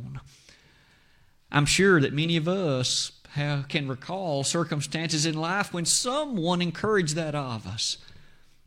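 Nothing technically wrong turns up in this speech recording; there's no fault to point to anywhere along it.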